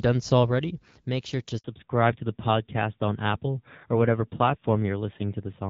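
Right after "already make sure to", at 1.58 s, there's a handover gap: the call switches networks, no audio gets through, and it goes silent for 60 ms until 1.64 s. From 1.64 s to the end there's a fallback to narrowband. The HD Voice link gives way to an older codec, so everything above 4 kHz disappears and the speech turns duller and rougher. The drop sounds consistent with going from about 12.65 kbit/s wideband to about 7.4 kbit/s narrowband.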